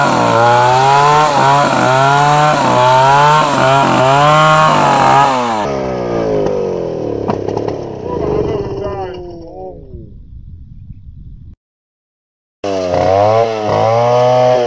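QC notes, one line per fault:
5.65 s to end: wrong sample rate. Pitch drops about 5.5 semitones and tempo slows to 0.73× together, unlike a pitch shift, which fits 22 kHz audio played at 16 kHz.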